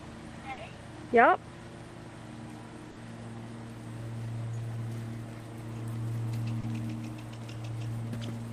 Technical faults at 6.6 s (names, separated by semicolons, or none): short concealed packet loss